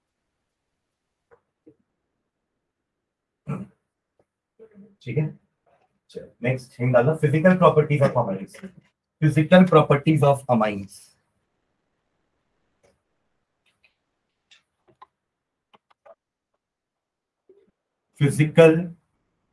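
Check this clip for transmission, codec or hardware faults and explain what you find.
Nothing wrong can be heard anywhere in this recording.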